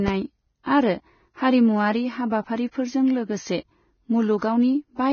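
Vorbis compression, throughout the speech: nothing is heard above 6.6 kHz, and the remaining treble sounds hissy and grainy, with roughened tones and smeared consonant attacks. The likely cause is a low-quality Vorbis encode, around 17 kbps, quantising the high-frequency residue into noise.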